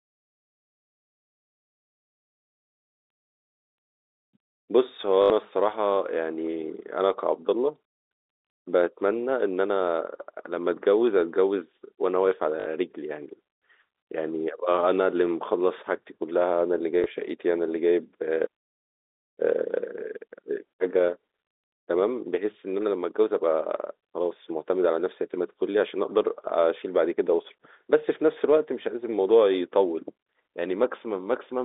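Speech over a G.711 telephone line, band-limited to about 300 Hz to 3.7 kHz. Packet loss with the last packet repeated causes brief robotic stutters at 5.22–5.30 s and 12.60–12.66 s and a small blip at 17.04–17.06 s. Each gap is filled by replaying one chunk. The two runs buzz, which fits 20 ms packets.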